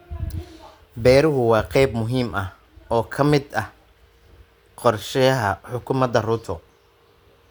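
No technical faults can be heard.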